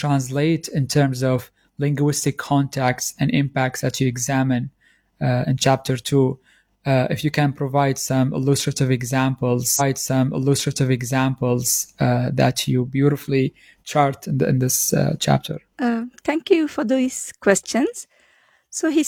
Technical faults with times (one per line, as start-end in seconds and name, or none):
9.76-11.76 stream segment repeated